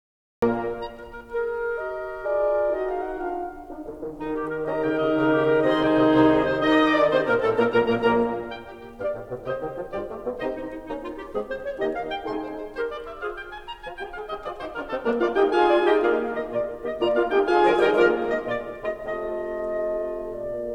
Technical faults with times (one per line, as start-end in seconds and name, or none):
0.00-0.42 cut-off start